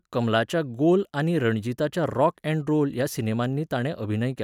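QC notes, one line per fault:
Nothing stood out on listening to this speech recording.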